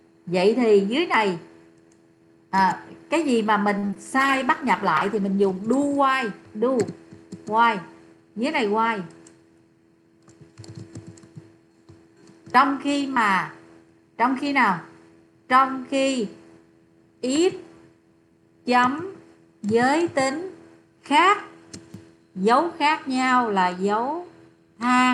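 From 3.78 to 3.96 s, repeated packet loss (robotic sound): four gaps, the longest 44 ms, were patched by extending earlier audio, leaving a choppy stretch.

From 4.19 to 5.82 s, a call bitrate drop made the encoder code more coarsely. The rough, muffled sound fits a fall from 64 to 20 kbps.

From 8.78 to 9.19 s, a jitter buffer speed-up trimmed about 50 ms of pitch periods, so the sound runs 10% faster at unchanged pitch and feels hurried.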